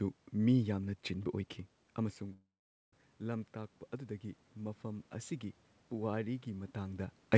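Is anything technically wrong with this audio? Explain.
Yes. A call audio freeze runs from 2.33 to 2.93 s. The last sound stretches into a short fading buzz, then goes silent for about 0.46 s. Delayed packets likely emptied the jitter buffer. The speech then resumes where it stopped, with nothing lost, just a 0.6 s gap.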